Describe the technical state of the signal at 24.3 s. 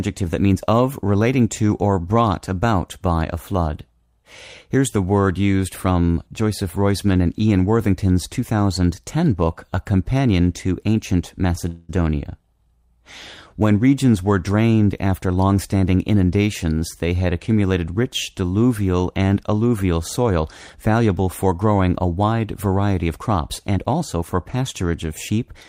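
At 24.3 s the receiver's jitter buffer is running a speed-up. After holding more audio than its target, it trims short stretches of one or a few pitch periods, over and over, from 23.02 s to 24.45 s, discarding about 150 ms in total. The speech therefore plays at roughly 109% of normal rate with its pitch unchanged. It sounds briefly hurried, right up to the end of that span.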